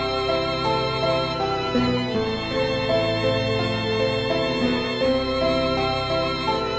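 No technical faults can be heard in the music at any point. There is nothing that needs a timestamp or a closer listen.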